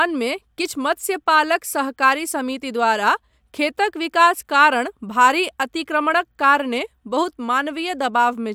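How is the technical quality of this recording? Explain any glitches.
No technical glitches are audible.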